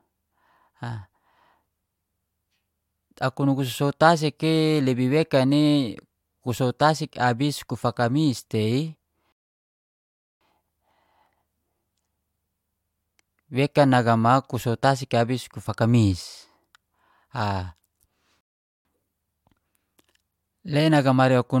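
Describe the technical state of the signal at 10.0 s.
At 10.0 s the speech is sitting inside a rebuffering stall that runs from 9.32 to 10.41 s. The player ran dry of downloaded audio and paused, so you hear plain silence, then the speech picks up exactly where it left off, just about 1.09 s late.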